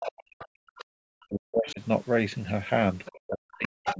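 From 0 to 1.81 s the talker's speech is pushed down hard, with the deepest dips around 40 dB, in what sounds like speech suppressed in double talk. The likely cause is the echo canceller treating simultaneous speech from both ends as echo and attenuating everything. Inside that stretch, short fragments of the other side's voice leak through at 0.39–0.46 s, 0.76–0.84 s and 1.67–1.73 s. They sit about 20 dB below the talker, likely because the canceller left residual loudspeaker pickup in the microphone signal. Another faint leak of the other side's voice appears at 3.05–3.09 s. Double-talk suppression then starts again at 3.08 s and runs to the end, again with drops of around 40 dB. During it, the other side's voice comes through at 3.85–3.96 s, only about 5 dB below the talker and clearly audible. The call's microphone processing limits the audio to 8 kHz.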